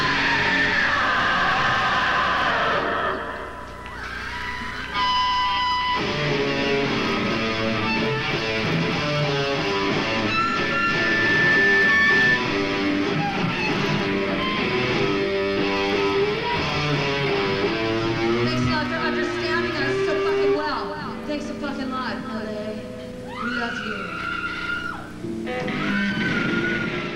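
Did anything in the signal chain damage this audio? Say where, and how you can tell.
Yes. Loudspeaker feedback squeal in the analogue microphone-to-loudspeaker loop, 9.61 to 12.44 s. A 1.8 kHz tone swells for about two seconds and ends up louder than the sound. The loop gain passed one at that frequency.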